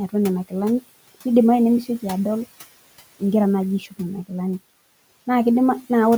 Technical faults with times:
3.80-3.93 speech cut by the noise suppressor

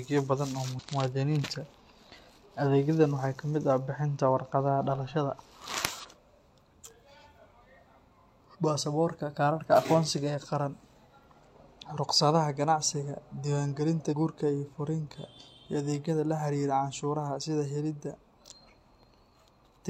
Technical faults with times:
0.75-0.79 damaged data in a compressed stream
5.99-6.05 damaged data in a compressed stream
8.50-8.56 damaged data in a compressed stream
14.07-14.14 damaged data in a compressed stream

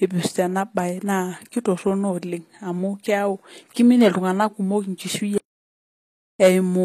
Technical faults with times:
0.00-6.84 HE-AAC compression
5.38-6.39 audio dropout to silence

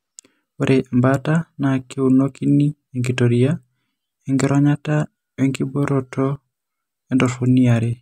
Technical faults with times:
none

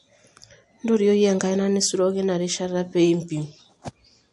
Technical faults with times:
0.00-4.33 MP3 compression

